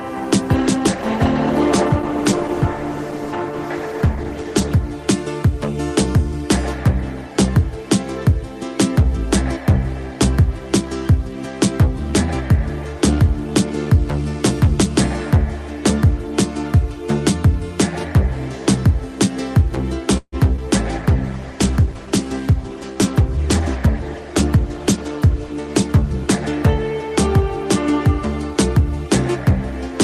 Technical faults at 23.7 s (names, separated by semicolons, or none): call bitrate drop; jitter buffer speed-up